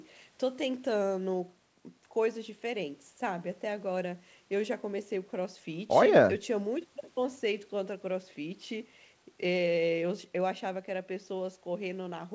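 No technical faults can be heard in this speech recording. The sound stops at about 8 kHz, which fits a wideband call codec such as G.722, and the call's normal microphone processing takes out the lowest bass.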